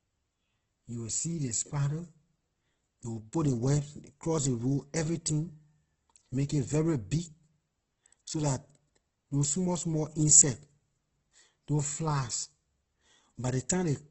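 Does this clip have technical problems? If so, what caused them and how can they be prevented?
Yes. Throughout the speech, likely Opus compression: nothing above 8 kHz, and starved bands are filled with noise, so tones turn grainy rather than MP3-like swirling, fitting roughly 12 kbps. Encode at a higher bitrate to prevent it.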